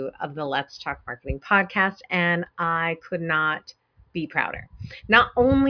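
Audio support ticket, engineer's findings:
No fault found on listening; nothing in the clip to trace to a component or mechanism.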